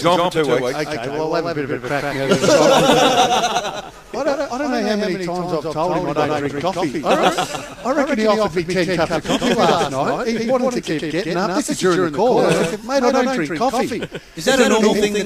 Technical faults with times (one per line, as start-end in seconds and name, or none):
0.00-15.26 doubled audio track